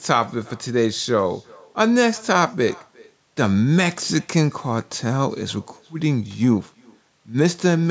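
Throughout, the speech carries an echo with no canceller. A far-end loudspeaker feeds its microphone, sending the audio back roughly 0.4 s late and about 28 dB down. It sounds like a faint, thin shadow. A spectrogram shows each syllable trailed by a weak delayed copy.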